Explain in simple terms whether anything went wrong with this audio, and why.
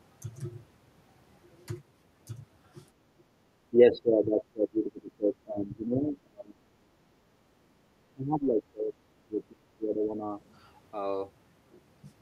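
The speech drops sharply or fades out from 3.11 to 3.29 s, 3.71 to 6.59 s, 6.97 to 7.16 s and 8.14 to 10.29 s. This is likely speech suppressed in double talk: the echo canceller couldn't distinguish this talker from overlapping far-end sound and turned both down.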